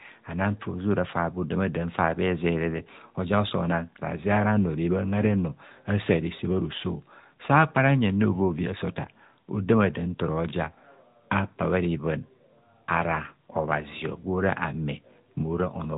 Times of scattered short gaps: none

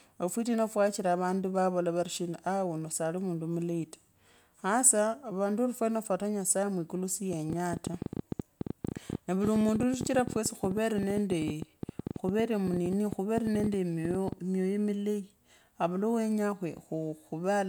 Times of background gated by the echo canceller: none

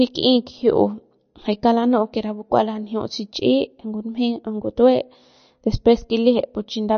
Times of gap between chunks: none

